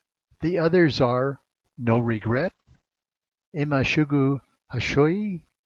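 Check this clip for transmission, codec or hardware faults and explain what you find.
There's one transmission fault, a call bitrate drop. Right after "others are", from 1.91 to 3.33 s, the call's bandwidth estimate fell, so the Opus encoder dropped from 32 to 10 kbps and narrowed its band from 12 kHz to 8 kHz. The speech goes rough and muffled for nearly all of that stretch before clearing up.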